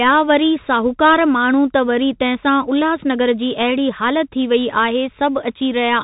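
Throughout the speech, the Bluetooth CVSD headset codec is plainly audible: each sample is a single up-or-down bit with an adapting step, which fits a 64 kbps stream. Nothing passes above 3.8 kHz, so a spectrogram shows a hard ceiling. Sibilants turn scratchy, and granular hiss fills the waveform's gaps.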